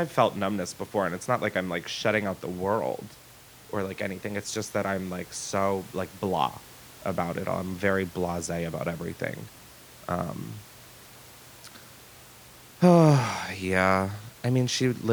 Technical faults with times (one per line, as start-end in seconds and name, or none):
none